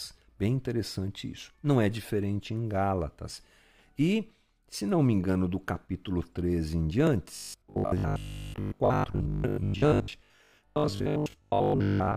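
From 7.36 s to the end at 12.16 s, the speech turns into a robotic sound from repeated short buffers. It becomes a rigid, metallic buzz near 50 Hz. Audio likely arrived too late, so a 20 ms stretch was replayed over and over, covering most of the time.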